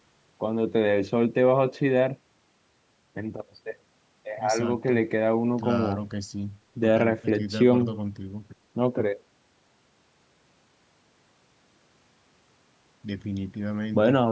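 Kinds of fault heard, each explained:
Nothing stood out on listening to this speech, which shows the ordinary high-pass trim of a call's microphone processing and carries nothing above 8 kHz.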